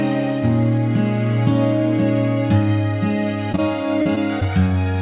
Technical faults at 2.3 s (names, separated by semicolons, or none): none